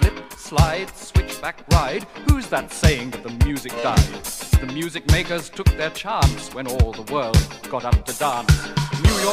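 Nothing in the audio stood out as a technical fault on listening.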